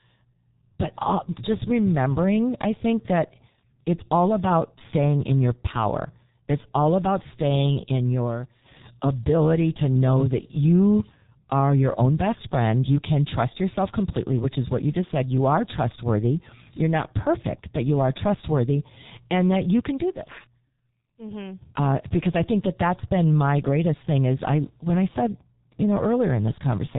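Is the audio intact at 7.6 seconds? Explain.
No. A piercing 5.1 kHz whistle swells over roughly two seconds to about 10 dB above the speech, from 6.65 to 8.85 s, between "in your power it's" and "ability to know that". This is a loudspeaker feedback squeal: the microphone re-amplifies its own loudspeaker output until that one frequency runs away. Beneath it, the speech is muffled and hoarse, with smeared consonants and nothing above 3.8 kHz. That is the heavy damage of the G.723.1 codec, whose slow frame-based voice model fits a roughly 6 kbit/s setting.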